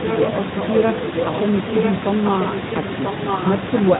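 From 0.09 to 0.32 s, 0.58 to 1.41 s, 1.7 to 1.91 s, 2.25 to 2.61 s and 2.9 to 3.46 s, a copy of the speech returns about 0.99 s late. This is echo leak, likely from a far-end loudspeaker whose echo canceller let the pickup through. The first stretch is roughly as loud as the speech, and later ones are quieter. Unlike reverberation, the copy is one distinct, fixed-delay repeat and not a smeared tail.

From 2.73 to 2.79 s comes VoIP packet loss concealed by the speech codec. One 20 ms frame was lost, and the decoder filled it by extending the preceding sound into a brief, fading stretch of buzzy tone or coloured noise that stays weak a little past the gap. Unlike a dropout, there is no hard silence or click.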